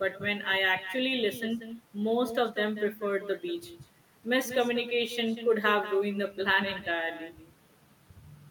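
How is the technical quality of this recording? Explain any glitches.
The recording has one persistent fault. Throughout, echo with no canceller returns each phrase about a fifth of a second later, roughly 13 dB quieter: a far-end loudspeaker feeds the microphone. Unlike room reverberation, it's a distinct, thinner repeat rather than a smooth tail.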